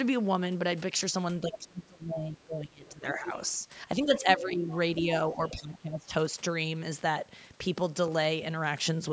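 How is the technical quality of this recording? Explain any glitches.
The recording has three kinds of glitch: speech dipping during overlapping talk, bleed from another voice, and a short burst of ticks near the end. Its sound reaches up to 8 kHz.

Speech suppressed in double talk, 1.48–3.26 s, 4.04–4.68 s and 5.35–6.12 s: likely an echo canceller ducking the talker while the far side spoke, with drops of about 25, 10 and 20 dB.

Other side's voice leaking through, 1.53–1.58 s, 4.05–4.39 s and 4.71–4.77 s: leftover loudspeaker echo likely escaped cancellation, heard as a second voice about 10 to 20 dB down.

CD scratch ticks, four between 7.91 and 8.41 s, the longest about 2 ms: disc damage exceeded error correction, leaving brief regular clicks where samples were patched or muted.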